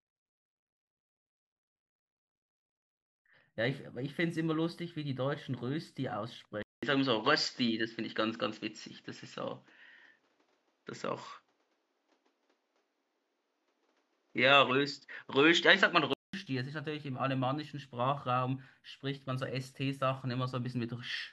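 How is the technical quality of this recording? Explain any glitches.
One fault stands out in this speech. Input switched to a poorer device, from 6.63 to 16.33 s: recording likely moved to another microphone. After a 200 ms silence at the switch, the sound dulls, with a level shift of roughly 5 dB and new background noise about 45 dB down.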